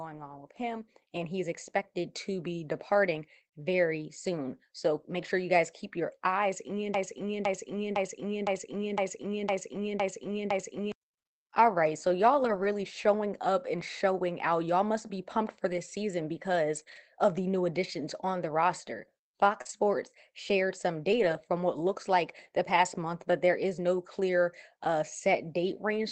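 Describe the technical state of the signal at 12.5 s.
Around 12.5 s the speech turns briefly rougher and grainier, with a noisy edge, from 12.43 to 12.65 s, yet nothing drops out. This is a lost packet rebuilt from error correction: packets went missing, and the decoder played the lower-bitrate backup copies carried in the packets that followed. The rebuilt stretch is about 120 ms, which fits a handful of 20 ms Opus frames, all within this call path's 8 kHz audio bandwidth.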